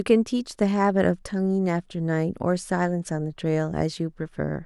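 Nothing goes wrong anywhere in this bit of speech, so there's no fault to point to at any moment.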